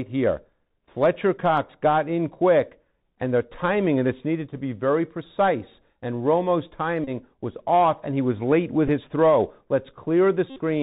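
Speech heard through a Bluetooth headset link, with the Bluetooth CVSD headset codec colouring the whole clip. The band stops at 4 kHz, so the sound is thin and telephone-like. The one-bit delta coding leaves a granular hiss under the speech, turns s sounds scratchy, and makes loud, bright passages distort where the adaptive step cannot keep up. The damage is plainly audible and fits a 64 kbit/s CVSD link. On top of that, Bluetooth headset packet repeated events occur three times. From 7.04 to 7.10 s and from 10.50 to 10.60 s, lost packets were replaced by the previous packet decoded again. Because the repetition falls every 3.75 ms, each of these stretches becomes a short, steady buzz near 267 Hz until clean packets resume. At 8.88 s the same concealment covers a much briefer gap and comes through as a very brief buzz.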